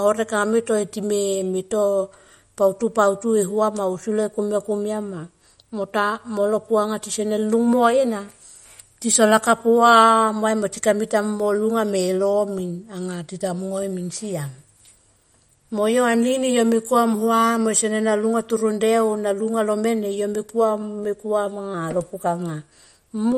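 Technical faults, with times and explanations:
Throughout, MP3 compression: the speech has a watery, swirling quality, with sibilants turning metallic and chirpy, and nothing reaches above 17.8 kHz. This is likely MP3 encoding short of bits, at a rate that sounds near 48 kbps. Starved of data, the encoder cuts the treble at a fixed frequency and drops weak frequency lines that then flicker on and off between frames. That flicker causes the swirl, and the smeared attacks blur consonant onsets.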